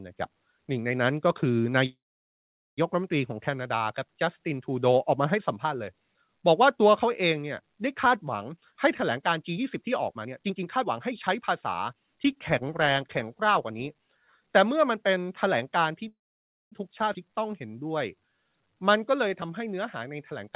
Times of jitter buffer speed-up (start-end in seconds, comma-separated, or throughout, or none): 8.49-14.09